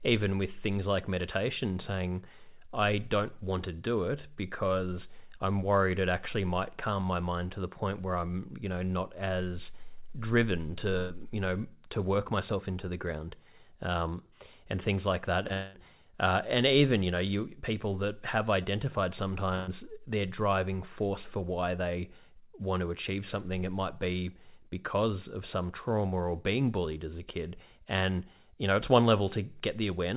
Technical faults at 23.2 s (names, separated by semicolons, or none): none